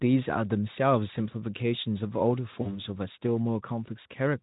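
From 2.61 to 2.82 s the speech shows VoIP packet loss concealed by the speech codec. About 40 ms of audio went missing, which fits two lost frames, and the Speex decoder filled the gap by repeating its last pitch and filter at falling gain. Unlike a plain dropout, there is no silent hole or click: the sound smears into a fading buzzy tone or coloured noise and stays weak for a while after packets resume.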